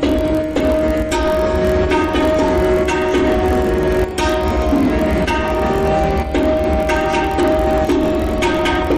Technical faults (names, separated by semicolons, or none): block size mismatch (padded)